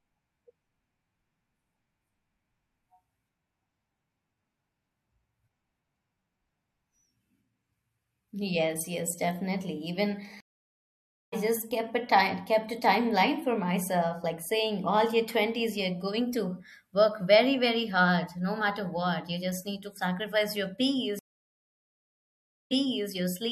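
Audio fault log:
10.40–11.34 s and 21.19–23.10 s, stream reconnect: silences of 0.92 s and 1.52 s where the connection dropped and a fresh decoder restarted, fading in. Unlike a plain dropout, playback resumes elsewhere. At "just kept a time" it skips about half a second ahead, and the second gap replays 0.4 s.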